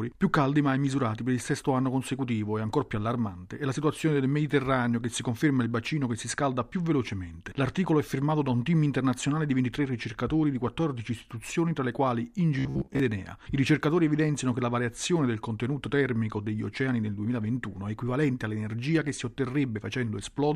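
From 12.59 to 13.0 s the sound turns into a rigid, metallic buzz at about 67 Hz, a robotic sound from repeated short buffers that only loosely tracks the original for roughly 0.4 s. The likely cause is audio arriving too seldom, so the playback filled the gaps by looping a fragment of about 15 ms, one period of that buzz. For most of this stretch the real audio was skipped in favour of those repeats.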